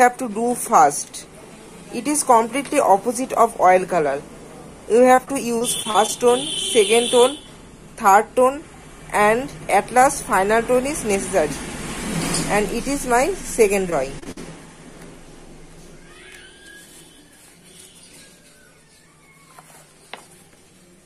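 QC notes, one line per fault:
5.15–6.1 s, repeated packet loss (robotic sound): roughly six brief dropouts arrive in quick succession, the longest about 37 ms. Each is patched by extending the sound just before it, so about 13% of the span is synthetic fill, leaving choppy sound with pieces missing.
13.9–14.38 s, repeated packet loss (robotic sound): a shorter, denser run of about four dropouts, the longest about 50 ms. Concealment repeats the preceding sound into each hole and covers about 22% of this stretch, leaving choppy sound with pieces missing.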